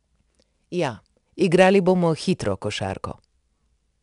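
4-bit ADPCM compression runs through the whole speech clip. Each sample is coded as a small 4-bit step from a predicted value, with the step size adapting as it goes, so the coding error rides along with the signal level. It is plainly audible as a gritty hiss on the louder speech, with roughness on sharp onsets. Nothing reaches above 10.7 kHz, which fits a sample rate near 22 kHz and a data rate of about 89 kbps.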